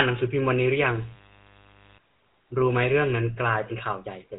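Speech heard through the GSM full-rate codec from start to finish, with plainly audible damage. The codec models the vocal tract and excites it with a coarse pulse train that keeps only a fraction of the excitation, leaving a buzzy, gravelly edge on every voiced stretch, which fits a 13 kbit/s speech coder. A spectrogram would show a hard ceiling near 3.9 kHz with nothing above it, and smeared, grainy harmonics below.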